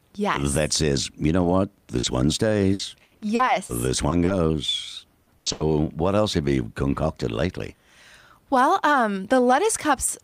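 Short concealed packet loss at 1.99 s, just after "says you know what": about 40 ms of the call arrived too late or not at all. The receiver bridged the hole by extending the last sound and then blending back into the real signal, which leaves a brief smear.

Repeated packet loss (robotic sound) follows from 2.73 to 3.71 s. Five dropouts add up to 260 ms, the longest 80 ms, so roughly a quarter of that stretch is patched-in audio. Each fill runs into the next loss, and the speech turns choppy.

Two more short concealed losses land at 4.09 and 4.25 s, each 20 ms, heard as small smears or wobbles.

The second robotic stretch runs from 5.23 to 5.62 s, ending just before "what else have you". It has four dropouts, the longest 90 ms, with about 230 ms filled. More than half of this span is concealment.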